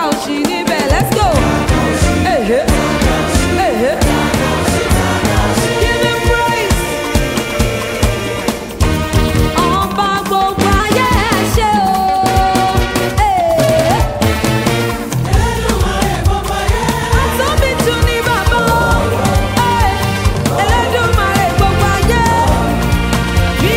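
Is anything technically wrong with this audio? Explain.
Yes. From 10.8 to 13.98 s the audio has a wrong sample rate fault. The samples are played back faster than they were captured, with no resampling, so speed and pitch rise together by the same ratio. The shift is about 9 percent (1.09x) and roughly 1.5 semitones sharp, which fits 44.1 kHz material played at 48 kHz. Across that span the sound is slightly hurried and raised in pitch, then returns to normal.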